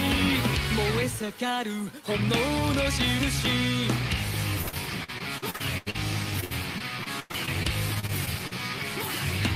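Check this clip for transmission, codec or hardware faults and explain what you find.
Two stretches of repeated packet loss (robotic sound) stand out. The first runs from 4.61 to 5.96 s, and the second from 6.40 to 8.53 s. Data arrived late or not at all, over and over. Each hole was patched by extending the last sound. In the first stretch about 30 percent is concealed, with gaps up to 86 ms. In the second, about 18 percent is concealed, with gaps up to 99 ms. The result is choppy audio with pieces missing.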